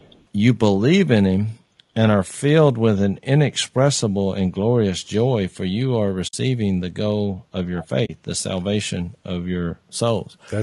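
Throughout, the speech sounds rough and grainy, with noise filling the gaps between harmonics, most likely low-delay AAC compression (AAC-ELD) at a low bitrate near 32 kbps.

From 0.0 to 0.25 s, a very faint delayed copy trails the speech by about 0.48 s, likely an echo leak from a loudspeaker the echo canceller didn't fully suppress.

At 6.27 to 6.34 s and 8.05 to 8.10 s, the sound fades into soft-edged silent holes of 60 ms and 40 ms. This is AAC frame loss with muting: the lost frames were zeroed and the overlapping windows smoothed the edges.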